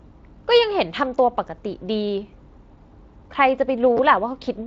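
At 3.97 to 3.99 s the speech briefly jumbles. This is chunks out of order: one 10 ms chunk arrived a chunk late, so it plays after the chunk that should follow it. No audio is lost, but the swap leaves three hard joins in that 20 ms stretch, heard as a tiny garbled flicker. On the waveform the cycles break off and restart mid-shape at each join. The spectrogram shows thin vertical broadband lines there, against the Speex-coded band that stops near 7.6 kHz.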